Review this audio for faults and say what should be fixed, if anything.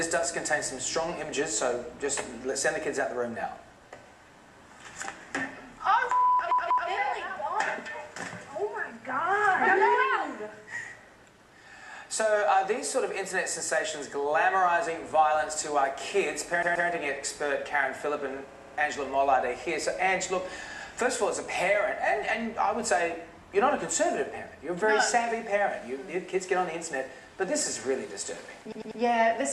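Repeated frames cause stutters at 6.51–6.90 s, 16.62–16.88 s, 18.51–18.77 s and 28.72–29.01 s. Each time, a short block replays. The blocks are 192, 128, 64 and 96 ms, played two to four extra times. Together they add about 1.2 s. To prevent this, check frame sequence numbers and discard duplicate frames before decoding.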